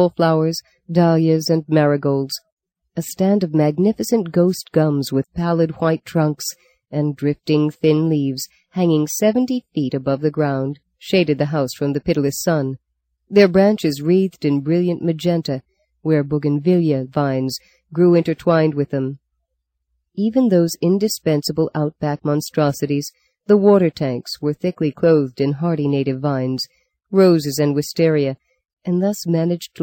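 Throughout the clip, the converter's sample clock wanders, a timing error of around a microsecond, so each sample lands slightly early or late at random. Where the waveform changes quickly, that small timing slip becomes a larger amplitude error, roughly 45 dB below the signal. The result is sample clock jitter, heard as a faint hiss and graininess that rides on top of the sound, thickening on loud and bright passages and disappearing in the quiet gaps.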